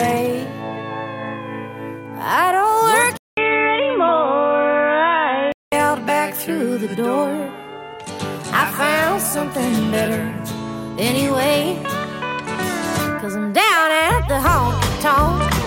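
From 3.17 to 5.72 s the sound turns dull and boxy, with nothing above 3.8 kHz and a 200 ms gap at the switch, likely an input switched to a poorer device.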